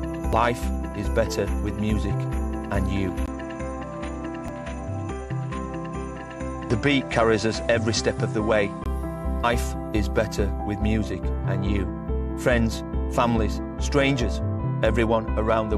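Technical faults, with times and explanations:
0.33, 4.48, 6.69, 9.43 and 14.58 s: damaged data in a compressed stream. Each is a quick glitch, where corrupted bytes made the decoder misread the frame, lose sync and hunt for the next frame header before playback carried on.
3.26 to 8.86 s: input likely switched to a poorer device. A 20 ms dropout marks the change, then everything above 10.2 kHz vanishes and the sound goes duller, with a new noise floor about 40 dB down and no real jump in level, until it clears again.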